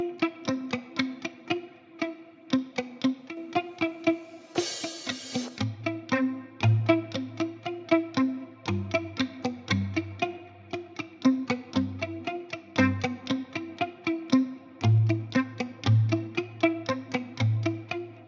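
At 3.29 s the sound and its background noise drop together by about 6 dB in one step, held until 3.37 s. This is a sudden gain jump, likely a digital gain change applied between adjacent samples with no ramp to smooth it.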